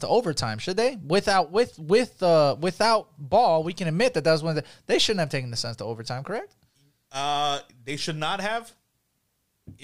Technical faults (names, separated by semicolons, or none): none